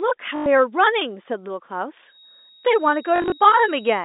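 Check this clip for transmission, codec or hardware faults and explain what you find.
Two kinds of fault are present, both riding over a clean telephone-band line.

Packet loss with last packet repeated: 0.36 to 0.46 s, a solid 100 ms gap, and 3.16 to 3.32 s, scattered dropouts with runs up to 40 ms. Repeated 20 ms packets buzz at 50 Hz, a robotic stutter rather than silent gaps.

Feedback whistle: from 2.05 s to the end, a steady 3.8 kHz tone well below the speech, swelling and fading slowly. This is likely loudspeaker-to-microphone feedback held just short of runaway. Unlike a mains hum, it is high and thin.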